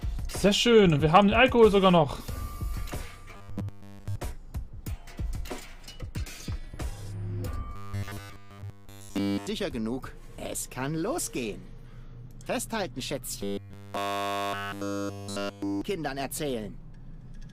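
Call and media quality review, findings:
Robotic sound from repeated short buffers at 3.37–4.16 s, 7.76–9.47 s and 13.41–15.81 s: rigid metallic 100 Hz buzz, real audio essentially all skipped. Likely a starved playout buffer looping about 10 ms chunks, and that loop length sets the pitch.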